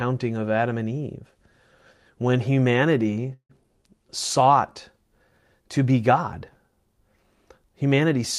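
From 3.33 to 3.51 s there is a call audio freeze. The last sound carries on as a fading buzz or hiss, then about 90 ms of silence. The cause is likely delayed packets draining the jitter buffer. The audio then resumes where it stopped, so about 0.16 s of gap is inserted and nothing is lost.

From 3.63 to 3.66 s comes a short concealed packet loss. About 40 ms of audio never reached the decoder in time. The receiver bridged the hole by extending the preceding sound and blending back. It is heard as a brief smear, and the playback jumps ahead by roughly that amount.

From 3.82 to 4.44 s the jitter buffer slow-down sets in. The receiver repeats single pitch periods or slices of pauses to rebuild its reserve. About 40 ms is added, so the audio runs at 95% speed. The pitch is unchanged and sounds are drawn out.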